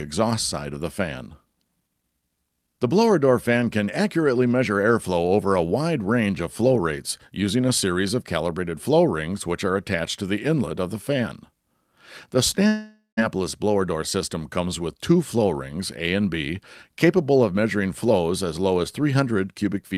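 A long network dropout runs from 12.67 s to 13.19 s. The last sound before the gap is stretched into a buzzy, hissy tail that fades out, leaving about 140 ms of silence before the audio returns. When it resumes, about half a second of material is gone. The likely cause is a stall in packet delivery: the receiver concealed the gap by extending the last sound, then gave up and skipped ahead.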